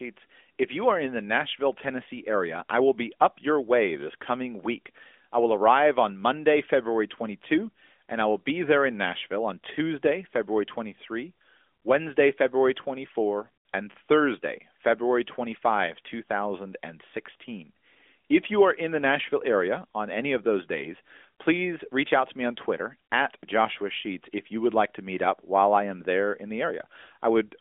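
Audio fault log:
Nothing stood out on listening to this speech.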